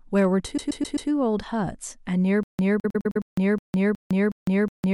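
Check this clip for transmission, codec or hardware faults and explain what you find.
Three kinds of fault are present: hard clipping near the start, two episodes of repeated frames, and a stutter with silent gaps that runs to the end.

Hard clipping occurs from 0.17 to 0.25 s. The level there overshoots the available range by about 2 dB, so the waveform peaks are cut flat. The flattened tops add high harmonics, heard as a brief crackle on the loudest part of the speech.

Repeated frames appear twice. From 0.56 to 1.09 s, a 130.6 ms block plays four extra times, adding 522 ms. From 2.81 to 3.23 s, a 104.5 ms block plays four extra times, adding 418 ms. The same compressed data being decoded again produces a rhythmic stutter.

The stutter with silent gaps starts at 2.43 s and lasts to the end of the clip. A 210 ms fragment returns every 366 ms, separated by 156 ms of digital silence, and repeats five times. 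The audio that should have followed is missing. The likely cause is a stalled stream that replayed its last buffered fragment at each retry before running empty.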